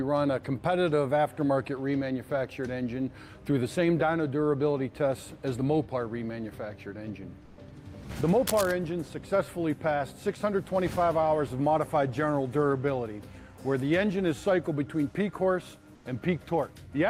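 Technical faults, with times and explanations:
7.45 to 7.57 s and 15.95 to 16.05 s, comfort noise in place of the background: for 120 ms and then 100 ms, the background, about 26 to 27 dB below the loud parts, turns flat and featureless and drops about 4 to 5 dB. This is likely discontinuous transmission, pointing to Opus DTX, where the receiver substitutes synthetic noise.
8.47 to 8.72 s, cable scratch noise: a quarter-second of dense, uneven scratching and rustling sits over the sound, only a little quieter than the signal itself. This is likely a worn cable, connector or control being moved, with its contact resistance changing rapidly and injecting bursts of noise.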